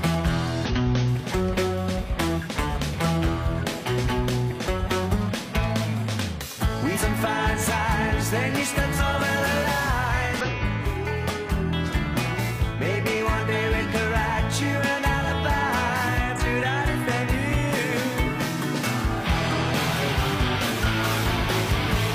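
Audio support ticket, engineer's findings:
Damaged data in a compressed stream, 0.65–0.71 s and 10.41–10.47 s: brief glitch, about 60 ms each. Corrupted bytes in the encoded stream; the decoder misreads those frames, loses sync, then resyncs at the next valid frame header.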